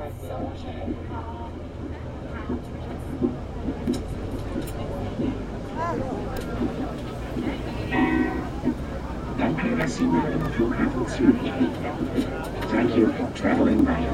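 No technical faults can be heard anywhere in the clip.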